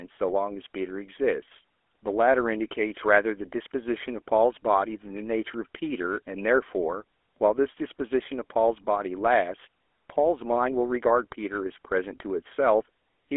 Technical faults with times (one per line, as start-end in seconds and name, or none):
0.00-13.37 GSM full-rate codec